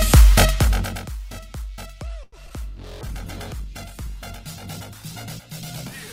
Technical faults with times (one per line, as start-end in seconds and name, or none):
0.44-1.08 zipper noise
2.23-2.34 short stall from a late packet
2.46-2.52 short concealed packet loss
3.02-6.12 call bitrate drop